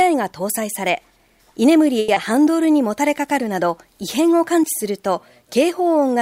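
From 1.99 to 2.10 s there is a short stall from a late packet. A packet arrived late, the buffer ran dry, and the receiver held the last sound for about 90 ms before resuming where it stopped. Unlike real loss, nothing is skipped. The sound simply hangs, with a faint buzz or dip.

At 2.14 to 2.18 s comes short concealed packet loss. About 60 ms of audio never arrived, and the receiver covered the gap with 20 ms of extrapolated sound, cutting the delay by roughly 40 ms. It is heard as a brief smear or wobble.

From 2.31 to 2.74 s a jitter buffer slow-down rebuilds the reserve. Tiny pitch periods or bits of pause are repeated many times, adding 56 ms and running the audio at 88% speed. The pitch stays the same. Unlike the single held sound of the stall, the stretching comes from many repeats, so everything drags.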